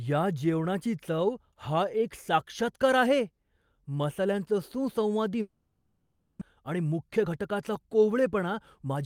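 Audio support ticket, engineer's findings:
Long network dropout, 5.41 to 6.43 s. Packet flow likely stalled. Receiver concealment stretched the last sound into a fading buzz/hiss for about 1 s, then near-silence for about 50 ms. About 600 ms of speech lost; delay grew by roughly 0.4 s.

Jitter buffer speed-up, 6.62 to 8.95 s. Buffer overfilled after late packets arrived together. Receiver repeatedly cut short pitch-period segments to shed around 0.3 s of backlog. Speech plays at 111% speed, same pitch, audibly hurried.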